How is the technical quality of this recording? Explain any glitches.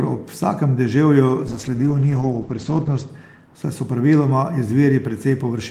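The quality is compromised by one call bitrate drop, from 1.49 to 3.15 s, ending just before "saj so praviloma". For about 1.56 s the speech turns muffled and rough, with a watery, smeared texture. The top end is missing, with audio bandwidth falling from 20 kHz to 8 kHz. The call's bandwidth estimate collapsed and the encoder had to code with far fewer bits, consistent with a fall from 32 kbps to 10 kbps. Opus then quantises more coarsely and drops the high frequencies until the rate recovers.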